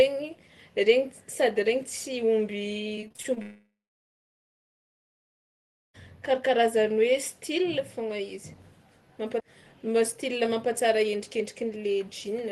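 From 2.95 to 3.38 s, repeated packet loss (robotic sound) chops the audio: seven short holes, the longest 26 ms, are each bridged by extending the preceding sound. About 30% of that stretch is synthetic fill, so it turns choppy, with pieces missing.

Right after, from 3.42 to 5.96 s, a long network dropout is the likely cause of about 2.5 s of lost audio. The last sound is stretched into a brief fading buzz or hiss, then roughly 2.2 s of silence follows before the audio resumes with that section missing.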